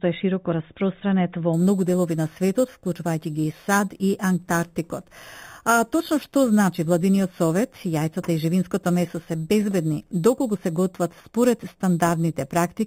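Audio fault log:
1.53–12.87 s, imaging from sample-and-hold upsampling: a bright, metallic fizz rides on top of the sound, rising and falling with its level, and its lowest band moves opposite to the pitch, sitting between 4 kHz and 8 kHz at about 19 dB below the signal. This points to audio at an 8 kHz rate raised to 44.1 kHz by simply repeating each sample with no smoothing filter, which leaves mirrored copies of the spectrum around each multiple of 8 kHz.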